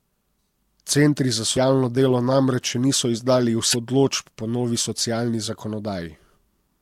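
At 1.53 to 1.58 s and again at 3.70 to 3.74 s, the speech breaks up briefly. Both are damaged data in a compressed stream. Corrupted bytes derail the decoder. It loses frame sync and hunts for the next valid header.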